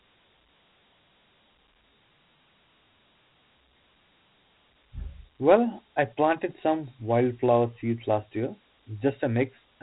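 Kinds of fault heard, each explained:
Dialogic VOX ADPCM: The speech has been squeezed through a 4-bit adaptive differential coder of the kind used for phone menus and voicemail, and a data rate of 32 kbps fits 4-bit samples taken 8,000 times a second. Each sample stores only a coarse step from a running prediction, so quantisation error rides along with the speech as a plainly audible gritty hiss, while nothing survives above about 3.9 kHz, leaving the top of the sound dull and boxed in.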